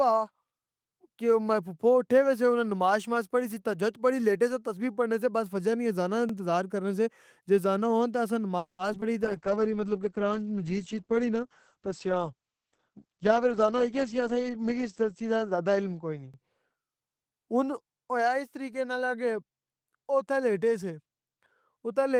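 At 6.29 s, just after "فجر نی اذان نا", a short stutter interrupts the speech: about 44 ms of audio plays twice. This is overlapping chunks. The audio was handled in 10-second blocks, each starting slightly before the previous one ended, so the seam repeats a sliver.

From 8.58 s to 8.81 s, right after "اذان آں ہون اسسی", the last sound stretches into a fading buzz, then about 120 ms of near silence, before the speech resumes where it left off. This call audio freeze inserts about 210 ms of pause and loses nothing. The likely cause is delayed packets leaving the jitter buffer empty.

Close behind, at 8.93 s, 8.98 s and 9.01 s, come three tiny smears or wobbles. Each is short concealed packet loss: about 20 ms of the call never reached the decoder, and the receiver bridged each gap by extending the preceding sound before blending back.

From 9.23 s to 17.86 s the speech turns muffled and rough, with its brightness gone. 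This call bitrate drop took the encoder from 32 kbps down to 9 kbps, and it stayed at its lowest for about 5.7 s. The audible bandwidth shrank from 20 kHz to 8 kHz as a result.

Within that stretch, from 12.72 s to 14.29 s, the speech sounds hurried but keeps its pitch. It runs at about 113% speed. This jitter buffer speed-up comes from the receiver trimming small pitch-period pieces to shed surplus delay, about a fifth of a second in total.

At 16.34 s the overlapping-chunks stutter returns, one block length after the first: another 44 ms repeat at the next 10-second seam.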